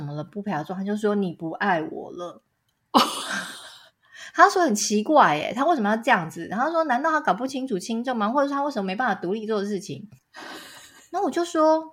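Nothing goes wrong anywhere in this speech recording, so there's no fault to walk through at any point.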